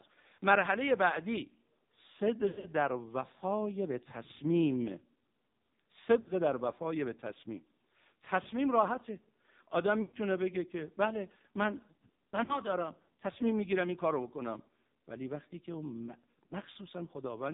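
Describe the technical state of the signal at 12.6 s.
At 12.6 s the sound is just coming out of a brief dropout that runs from 12.44 to 12.60 s. The sound smears and thins into a short warble, then sinks toward silence before resuming weak and rough. This is lost AMR speech frames. Radio errors corrupted the data, so the decoder filled the gap by repeating its last good pitch and vocal-tract settings at falling gain. The gap fits two lost 20 ms frames, about 40 ms of missing data.

Across the whole clip, including this moment, the speech has the AMR narrowband mobile codec's heavy damage. Nothing above 4 kHz remains, which gives it a boxed-in, telephone quality. The voice is also buzzy and synthetic. The codec rebuilds speech from a vocal-tract model excited by a few pulses in each 5 ms subframe. The low bit budget, which fits the 5.9 kbps mode, leaves too few pulses to capture natural texture, so the voice comes out coarse and artificial.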